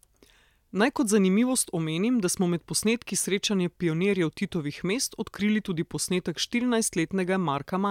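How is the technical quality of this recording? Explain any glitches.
No glitches can be heard anywhere in this speech recording. There is nothing to explain, since no moment stands out as a technical fault.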